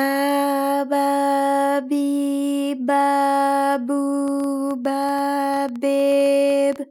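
From 4.28 s to 6.77 s, a train of clicks ticks and pops over the sound at about 7.7 per second, unevenly spaced, around twenty in all, peaking roughly as loud as the audio itself. Interference from nearby equipment or a faulty connection or power supply is the likely cause.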